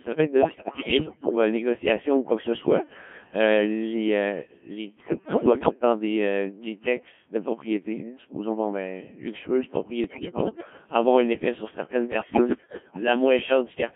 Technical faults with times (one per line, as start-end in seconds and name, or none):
0.00-13.96 Codec 2 vocoder
0.37-1.35 bit errors on digital voice radio
5.00-5.74 bit errors on digital voice radio
10.04-10.70 bit errors on digital voice radio
12.12-13.01 bit errors on digital voice radio